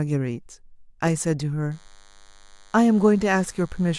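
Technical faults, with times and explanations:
1.71 s to the end, DECT cordless phone buzz: a DECT handset or base station near the recording chain transmits a short radio burst every 10 ms, and part of the audio circuitry rectifies those bursts into the signal. The result is a thin, steady buzz at a 100 Hz repetition rate, rich in harmonics, sitting faintly under the speech at roughly 35 dB below it and continuing unchanged until the clip ends.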